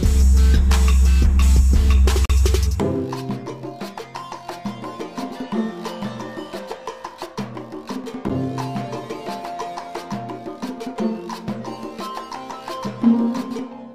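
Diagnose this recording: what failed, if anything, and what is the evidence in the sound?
Gap between stream segments at playback: hard-edged silences at 2.25–2.30 s and 8.29 s, six seconds apart, where segment timestamps left holes filled with silence.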